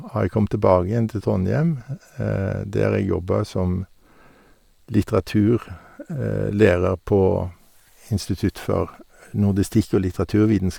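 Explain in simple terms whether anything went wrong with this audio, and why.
Throughout the recording, the speech carries a breathy, grainy edge, likely from Bluetooth LC3 compression squeezing it hard. Unlike a muffled low-quality link, the treble still reaches about 20 kHz, but it comes back partly as noise instead of clean detail.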